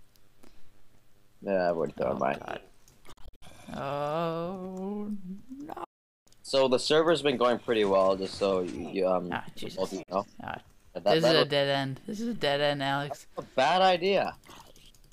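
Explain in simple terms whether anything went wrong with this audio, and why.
Three short silences break the audio, most likely from a Bluetooth dropout, where sound sent wirelessly to headphones arrives too late and is discarded. From 3.12 to 3.42 s there are several brief gaps, the longest about 58 ms. From 5.84 to 6.27 s the sound vanishes for about 0.42 s, and at 10.03 s it drops out for about 44 ms. Unlike a pause or a glitch that repeats sound, the audio comes back further along, as if it had kept playing.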